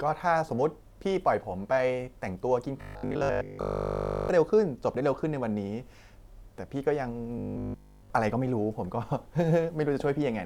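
From 2.77 to 4.29 s and 7.38 to 8.10 s, robotic sound from repeated short buffers gives the speech a rigid, metallic 50 Hz buzz, likely from a looping 20 ms buffer.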